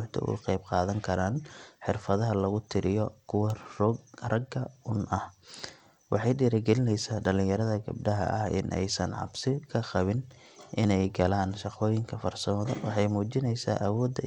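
A speech recording with dull, flickering treble and a gritty, aliased edge throughout, likely Bluetooth SBC compression at a starved bit pool, consistent with around 96 kbps.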